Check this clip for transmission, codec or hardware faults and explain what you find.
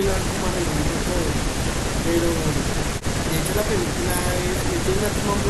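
I hear no faults anywhere in this speech recording.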